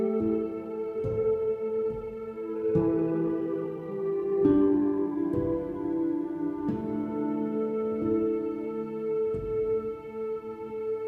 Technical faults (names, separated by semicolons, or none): time-stretched section